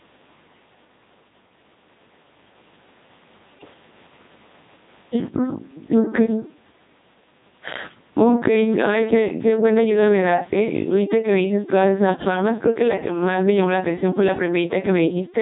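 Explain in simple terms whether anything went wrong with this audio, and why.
Yes, a few things went wrong. The whole clip runs through the Codec 2 vocoder, which rebuilds the voice from pitch and a rough tone outline rather than keeping the real waveform. That's why everything sounds buzzy and robotic, and the damage here is heavy.

You'll also hear gain pumping all the way through. Loud and soft parts end up closer in level, so the sound is squashed. The likely cause is the input gain set far too high, with a fast limiter clamping down on every loud sound.

Then, from about 3.59 to 3.74 s, there's a short burst of bit errors on digital voice radio. Flipped bits scrambled a handful of vocoder frames, so the voice briefly jumps in pitch and loudness and turns into a warbly, bleepy garble before settling back.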